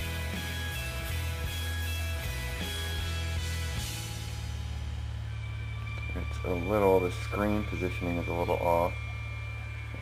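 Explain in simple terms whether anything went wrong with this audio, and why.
Nothing went wrong here.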